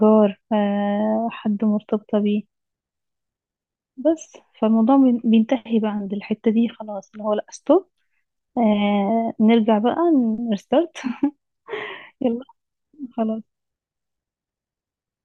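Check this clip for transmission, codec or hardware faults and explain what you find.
No faults can be heard in this speech.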